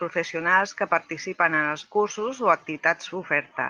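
A brief rough, noisy patch at 0.39 s, just before "que participen", and a longer one from 2.19 to 2.29 s, where the sound turns grainy without any gap. Each is a lost packet rebuilt from error correction: the Opus decoder in this 12 kHz call path played low-bitrate copies carried in following packets, about 20 ms and 60 ms of audio, which fits one and three lost packets.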